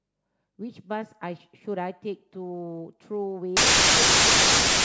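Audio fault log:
3.57–4.84 s, wrong sample width: packed 24-bit data read as 32-bit splices bytes from neighbouring samples, burying the speech in loud noise, 1.33 times too fast.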